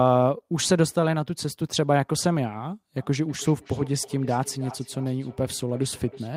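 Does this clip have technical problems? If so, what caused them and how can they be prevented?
Yes. From 2.97 s to the end, the speech has feedback echo between two devices: a second device on the call replays it, the first microphone recaptures it, and its echo canceller ignores that path, so repeats return about every 0.3 s at about -20 dB. Keep one device per room, or mute the second device's speaker and microphone.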